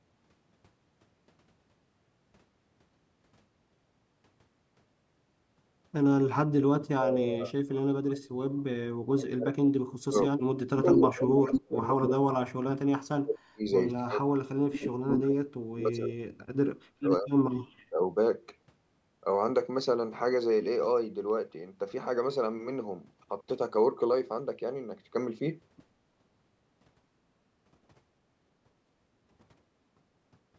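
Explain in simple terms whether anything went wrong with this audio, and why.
Yes. The voice dips sharply or drops out in pieces at 6.21–8.64, 9.04–13.62, 13.99–14.97, 15.61–16.56 and 17.01–18.01 s. This is likely speech suppressed in double talk, where the call's echo canceller turned down this side's voice along with the loudspeaker echo as they overlapped.

A delayed second copy of the voice comes back at 10.78–11.6, 12.02–12.09 and 15.09–15.32 s, trailing by about a quarter second, then 0.16 s. This is likely an echo leak from a loudspeaker.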